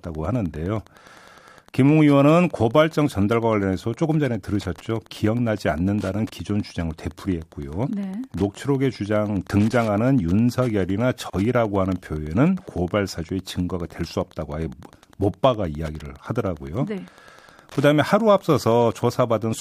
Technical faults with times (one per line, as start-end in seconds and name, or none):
0.00-19.61 Wi-Fi interference
11.30-11.33 gap at a join of encoded pieces